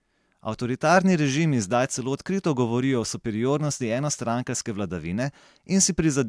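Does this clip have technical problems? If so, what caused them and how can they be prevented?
No, no technical faults heard.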